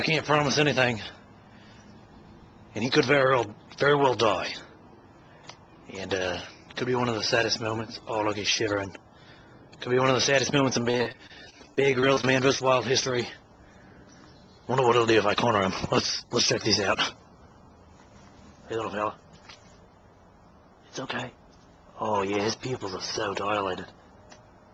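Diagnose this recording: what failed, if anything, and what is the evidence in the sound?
The network stage failed with repeated packet loss between 10.91 and 12.25 s. Packets arrived late or not at all, in quick succession, and the receiver patched each hole by stretching the last good sound forward, about 256 ms of filler across the stretch, with no single gap longer than 30 ms. Another 180 ms simply went missing. Since roughly a fifth of that span is concealed, the audio turns choppy, with a stuttering quality.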